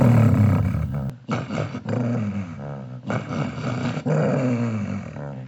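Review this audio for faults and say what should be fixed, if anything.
From 1.10 s to the end, the sounds turn dull and about 10 dB quieter. There is no gap. Nothing passes above 7.6 kHz. A faint new noise floor sits roughly 40 dB below the signal. The likely cause is an input switched to a poorer device. Lock the recording input to one device, and turn off automatic switching for the session.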